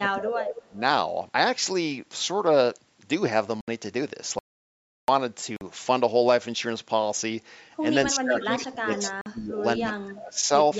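From the first moment to 0.78 s the speech is held down by speech suppressed in double talk, most likely an echo canceller ducking the near talker while the far side also spoke. The level sinks by roughly 20 dB across about 0.7 s of this stretch. The voice is pushed down by the canceller, unlike a true dropout, where the input itself is lost.

At 3.61 to 3.68 s there is a Bluetooth dropout, a hole of about 70 ms. Its length fits three lost packets. The speech resumes as though it had kept running underneath, so a short slice is simply missing. Two more of these holes follow, at 5.56 to 5.61 s and at 9.21 to 9.26 s, each about 46 ms, which fits two packets apiece. Their brevity and clean, repeatable sizes mark them out from the longer gap.

That longer gap runs from 4.39 to 5.08 s, an audio dropout to silence lasting about 0.69 s. The likely cause is a lost input, with the recorder writing silence in its place. 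The gap is dead silent with no room tone at all. Whatever was said inside it is gone.

Double-talk suppression returns from 8.13 to 10.5 s and cuts deeper, about 25 dB, across roughly 1.5 s. Within it, at 8.95 to 9.1 s, an echo leak lets through a faint copy of the voice about 239 ms late and about 15 dB under the speech. It is a separate, trailing repeat rather than a smeared room reverberation, and it sits on the 8 kHz-limited call band.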